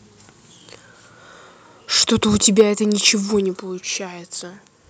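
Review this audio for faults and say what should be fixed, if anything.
From 2.46 to 2.61 s the loudest bit of speech gets a harsh, crackly edge where the peaks are flattened. That's most likely microphone overload: the input was driven about 3 dB past what the converter can represent, so the tops of the waveform are sheared off. Only a small share of the samples actually hit the ceiling, but that's enough to hear as grit on those syllables. To prevent it, set the mic input a few dB lower so speech peaks stay comfortably under full scale.

Right after that, at 2.62 s, the whole level drops in a single step, speech and background together, by about 2 dB. That sudden step, landing just after the clipped peak, points to the microphone volume being stepped down, likely by the call software reacting to the overload and pulling the device's input gain back in one jump rather than easing it down. 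To prevent it, start with a sensible input level, or turn off automatic mic gain adjustment so the software never needs to correct it mid-call.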